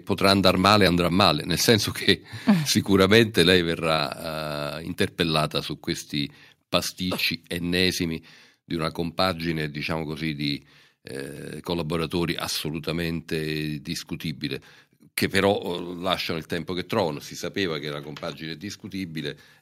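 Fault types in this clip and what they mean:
Microphone overload: at 0.30 to 0.76 s, 1.21 to 1.25 s, 1.68 to 1.71 s and 3.01 to 3.41 s, the loudest moments of speech acquire a harsh, crackly edge. The likely cause is input gain set so high that peaks ran about 2 to 4 dB past the converter's ceiling, so their tops were sliced flat. Only a small fraction of samples is flattened, but each flattened peak adds the gritty distortion heard on those syllables.
Microphone volume stepped down: at 1.02 s, the whole signal, speech and background together, drops abruptly by about 2 dB and stays at the lower level. This single step comes right after the first overloaded stretch, likely because the call software detected the clipping and cut the device's input gain in one move. The overloads at 1.21, 1.68 and 3.01 s show that the reduction was not enough to stop the peaks from clipping.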